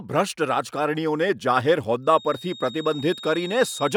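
From 2.0 s to the end, a thin feedback whistle at 3.7 kHz sits well below the speech, likely from a speaker-microphone loop; spectrograms show one steady horizontal line.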